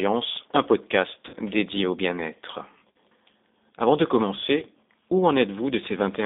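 The whole thing runs through the G.729 codec at 8 kbit/s. Everything sits between 200 Hz and 3.7 kHz, with a plainly rough, synthetic edge from the pulse-based rebuild.

There's VoIP packet loss concealed by the speech codec at 1.29–1.35 s (right before "dédié au"), 2.91–2.96 s and 4.60–4.66 s. The decoder stretches its last frame into a fading buzz or coloured noise, then takes a moment to recover.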